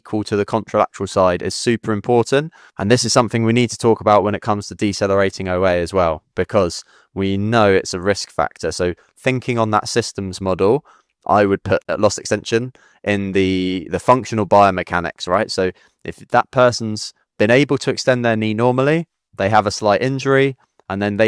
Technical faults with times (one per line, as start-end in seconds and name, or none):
none